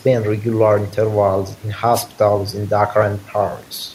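At 1.93 s the speech is hit by a wireless microphone noise hit lasting about 0.12 s, to 2.05 s. The FM radio link from the transmitter briefly fades as reflected signals cancel, so the receiver's own noise surges up and partly buries the voice, heard as a quick swish of static. On a spectrogram it shows as a short broadband smear of noise across the band; the waveform gains a fuzzy, dense patch there.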